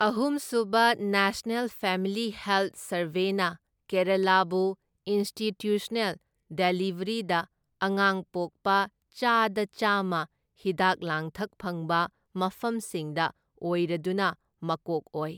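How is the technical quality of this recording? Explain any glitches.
No technical faults can be heard anywhere in the recording, and the signal stays intact and continuous throughout.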